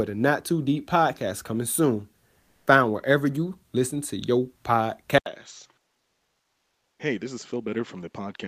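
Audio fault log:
2.39 to 2.67 s and 5.99 to 6.99 s, comfort noise in place of the background: right after "podcast coming soon", a 280 ms pause, and later a full second, lose their real room sound. The sender's voice detector judged these gaps silent and stopped transmitting, likely under Opus DTX, so the receiver filled them with synthetic noise. It is steady and featureless, about 2 dB quieter than the true background, which sits about 43 dB and about 54 dB below the loudest sound.
5.18 s to the end, input switched to a poorer device: the capture likely moved to a lesser microphone or a headset call profile. An 80 ms silence marks the switch, then the sound turns duller and boxier, with nothing above 7.6 kHz. The level drops by roughly 10 dB, and a new noise floor appears, roughly 45 dB under the signal, the new device's own background noise. The change is abrupt rather than gradual.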